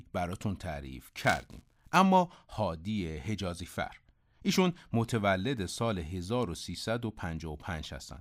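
From 1.16 to 1.97 s the speech takes on a steady robotic buzz at 200 Hz, the mark of buffer tearing. Writer and reader of the ring buffer have crossed, splicing a small slice of audio about 15 ms stale into each 5 ms period. Unlike dropouts, it persists only while sound plays.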